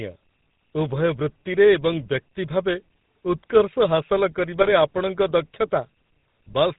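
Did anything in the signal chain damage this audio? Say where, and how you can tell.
Yes. The codec stage shows GSM full-rate codec damage throughout. Speech sounds buzzy and gravelly, with nothing above 4 kHz. This fits a 13 kbps pulse-excited vocal-tract model.

The network stage adds GSM bit errors from 4.58 to 4.73 s. Speech breaks into squawks and gargling there. Corrupted filter, pitch and gain values are distorting several decoded frames.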